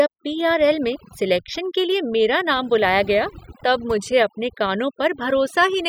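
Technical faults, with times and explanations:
Throughout: overdone noise removal. Aggressive denoising gates bands near the noise estimate, leaving a lowered background with twinkling specks; spectrograms show black gaps and scattered isolated dots.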